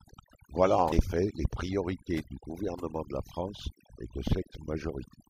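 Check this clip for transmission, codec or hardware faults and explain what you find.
Two faults turn up: overdone noise removal across the whole clip, and two short bursts of damaged data in a compressed stream.

The overdone noise removal runs from start to finish. The noise reducer was set too aggressively, so any frequency band whose level sat near its noise estimate was pushed far down or muted. Quiet parts of the speech were cut along with the noise. The gaps sound almost silent, with faint twinkling specks. A spectrogram shows a blank background with isolated flickering dots, and the speech harmonics look patchy and broken.

The damaged data in a compressed stream is heard at 0.91 s and again from 5.13 to 5.16 s. Corrupted bytes there left the decoder unable to read its frames correctly, so it lost sync and skipped forward to the next valid frame header. Each event is brief. On the waveform they show up as abrupt discontinuities.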